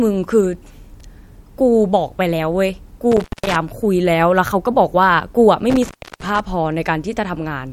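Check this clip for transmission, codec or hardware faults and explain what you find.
Intermittent contact affects this speech at 3.12–3.56 s and 5.70–6.40 s: a loose connection opens for 194 ms and 314 ms respectively, dropping the signal, with crackle at each break.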